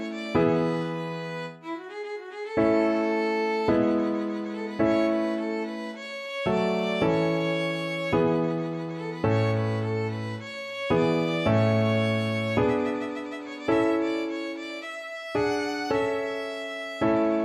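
Nothing stood out on listening to this audio.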